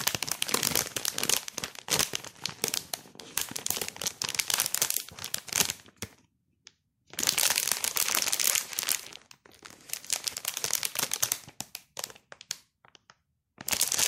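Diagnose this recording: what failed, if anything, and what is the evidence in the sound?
Nothing failed; the sound gives no evidence of a fault at any stage of this recording.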